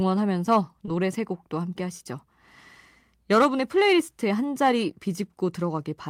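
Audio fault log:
0.85–0.89 s, short concealed packet loss: about 20 ms of the speech arrived too late for the decoder, and the receiver covered the gap by extending what it had just played, carrying the last pitch forward if voiced or continuing shaped noise if not, for about 18 ms before blending back into the real signal. The result is a brief smear or wobble in the speech, and a short consonant there may be lost.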